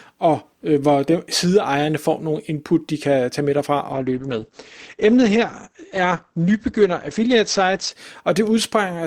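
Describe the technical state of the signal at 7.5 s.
At 7.5 s the speech is inside an adaptive stream at a lower bitrate, running from 3.92 s to 7.92 s. The player switched to a thinner version of the stream when the connection slowed, so the treble stops abruptly with nothing above 8.4 kHz. That sound fits a drop from around 64 kbit/s to roughly 12 kbit/s Opus. Quality changes suddenly at both ends of the stretch, with no gap.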